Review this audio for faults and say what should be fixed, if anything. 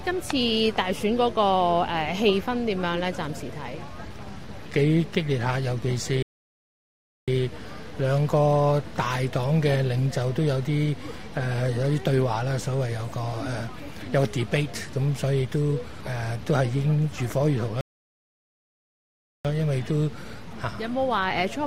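The sound cuts out mid-flow twice and goes silent before carrying on: first from 6.22 to 7.28 s, a gap of about 1.05 s, then from 17.81 to 19.45 s, about 1.64 s. These are playback stalls, likely caused by the player running short of data or having its output thread blocked, so nothing reached the output until it recovered. To prevent it, give playback a larger buffer and keep the audio thread free of blocking work.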